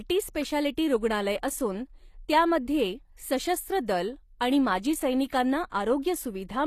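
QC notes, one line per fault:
throughout, HE-AAC compression: The treble above the lower coded band sounds rebuilt rather than captured, with gritty, lispy sibilants. This is likely HE-AAC, whose spectral band replication copies lower bands upward under a coarse envelope, so the upper harmonics of the speech no longer line up with those below the crossover. The damage is plainly audible, which fits a low bitrate around 24 kbps, and nothing is present above 14.9 kHz.
5.70 to 5.72 s, pre-echo: A brief hiss of about 23 ms arrives just ahead of a sharp speech onset, and the attack itself sounds softened and smeared. The transform coder spreads its quantisation noise evenly across a whole block. When the transient lands late in that block, noise sized for the loud attack also fills the quiet stretch before it, where nothing masks it, so it is heard as a short wash that leads the onset.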